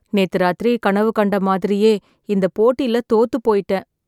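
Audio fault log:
No fault in this log.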